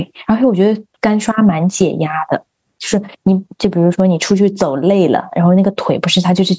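Gain pumping runs through the whole speech recording. The gain swings by roughly 10 dB, ducking the moment speech returns, so loud and soft passages sit unnaturally close in level and the sound feels squashed. The likely cause is input gain set far too high, with a fast limiter clamping down on each loud sound. A noise gate would silence the pauses instead of letting the noise rise. The band stops around 8 kHz, as expected from call microphone processing.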